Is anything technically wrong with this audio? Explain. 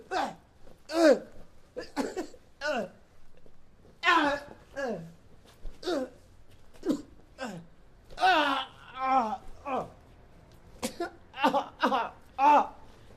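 No, nothing technically wrong turns up anywhere in this audio, so there's no problem to point to.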